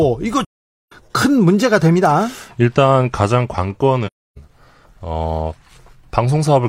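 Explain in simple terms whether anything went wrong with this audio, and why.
Something did go wrong. The speech drops out twice, from 0.44 to 0.92 s and again from 4.06 to 4.38 s. This is AAC frame loss with muting. Chunks of the compressed audio never arrived, so the decoder filled them with silence. The sound fades out and back in smoothly. The gaps last about half a second and about a third of a second, which points to several lost frames in a row each time.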